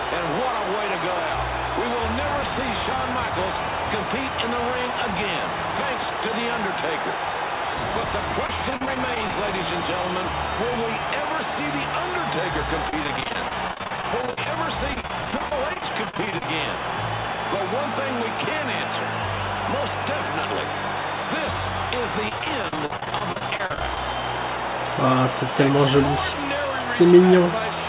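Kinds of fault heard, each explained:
Repeated packet loss (robotic sound): at 8.45–9.30 s, 12.90–16.48 s and 22.29–23.97 s, packets go missing again and again, and each gap of up to 40 ms is filled by extending the previous sound, leaving the audio choppy with pieces missing.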